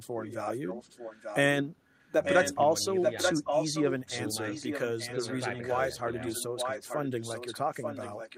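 Speech shadowed by a delayed copy of itself, trailing about 0.89 s behind, at 0.19–1.38, 1.94–2.58, 3.02–4.3 and 4.48–8.37 s, sometimes nearly as loud as the voice: likely an echo leak, the far end's echo canceller letting its loudspeaker sound back through.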